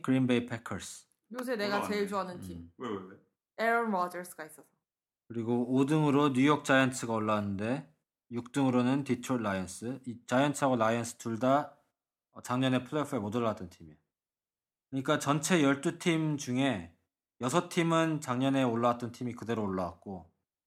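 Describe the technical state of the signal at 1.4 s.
At 1.39 s an electrical switching spike sits on top of the speech: a sharp snap lasting only a few milliseconds and peaking at around -25 dBFS. Its shape, an abrupt arc-like burst added to the signal rather than any change in the speech itself, points to a nearby switch, motor or static discharge, likely coupling a brief transient into the audio line.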